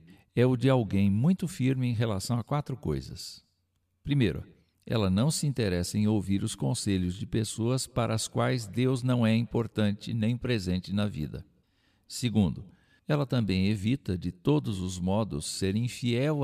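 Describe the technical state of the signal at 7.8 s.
At 7.8 s the signal is intact, with no dropout, distortion, glitch or other technical fault audible at that point in the speech.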